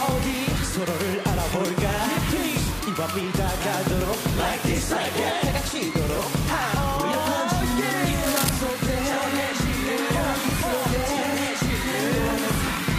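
Cable scratch noise from 8.23 to 8.49 s: a burst of uneven scratching, nearly as loud as the sound itself, likely from a worn cable or connector being moved.

Periodic USB or driver dropouts from 9.40 to 12.91 s: every 0.121 s a few milliseconds of audio are skipped, giving steady ticks as the driver or bus stalls.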